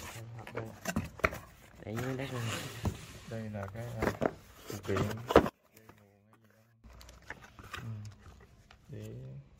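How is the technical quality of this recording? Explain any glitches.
The recording has one clear glitch, a sudden collapse in level partway through. One channel inverted, from 5.49 to 6.84 s, is the likely cause: with one side's polarity flipped, everything common to both channels cancels when they are combined to mono, leaving only their difference. The sound drops by about 26 dB and turns faint, with the centred content largely gone, before snapping back to full level.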